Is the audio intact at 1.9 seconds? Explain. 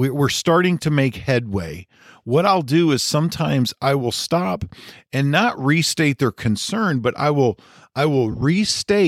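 Yes, the speech at 1.9 seconds is intact, with only the light lossy compression that runs through the whole clip and no fault at that point.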